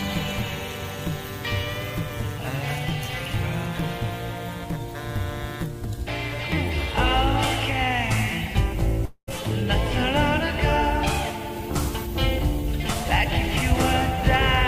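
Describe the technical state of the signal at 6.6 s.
At 6.6 s the signal is intact, with no dropout, clipping, glitch or other fault audible at that point.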